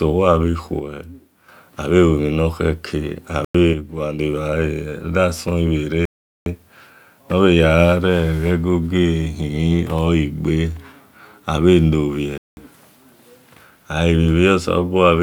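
From 0.80 to 1.48 s, and again from 3.73 to 4.19 s, the speech abruptly drops by about 6 dB and then jumps back up. This is likely one channel dropping out: with one side of the stereo pair gone, the mono sum loses half of what both sides shared, and anything present only in the missing side vanishes.

The speech also cuts to dead silence three times: from 3.45 to 3.55 s for 100 ms, from 6.05 to 6.46 s for 0.41 s, and from 12.38 to 12.57 s for 0.19 s. Each time it resumes abruptly. These gaps likely come from a Bluetooth stall, where interference delays packets, the headphones' buffer empties, and playback halts until the retransmitted audio arrives.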